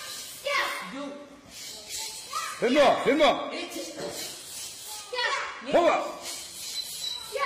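Nothing technically wrong turns up anywhere in this audio.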